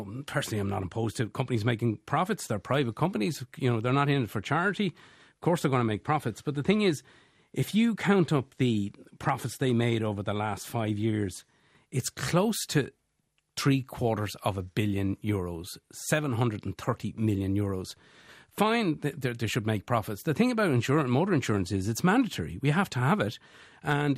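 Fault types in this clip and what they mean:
MP2 compression: the speech sounds dull and muffled throughout, with a gurgling, granular roughness as upper frequencies flicker in and out. This is likely MPEG Layer II coding at a low rate, around 80 kbps, starving its sub-bands of bits so upper bands drop out and the rest are coarsely quantised.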